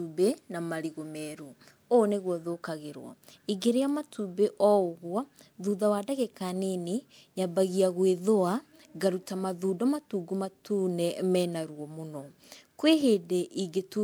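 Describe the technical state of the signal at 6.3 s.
At 6.3 s the speech carries generation loss, present throughout. It sounds swirly, hollow and smeared, with blurred attacks. This likely comes from repeated MP3 re-encoding, a few passes, consistent with about 128 kbit/s.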